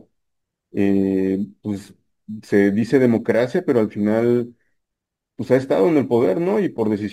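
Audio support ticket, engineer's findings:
Crude rate conversion throughout, entire clip. Resampler upconverting by nearest-sample repetition, no interpolation or anti-imaging filter; the error pattern fits 44.1 kHz to 48 kHz. Result: gritty, inharmonic fizz riding on louder and brighter speech, roughly 35 dB below the voice.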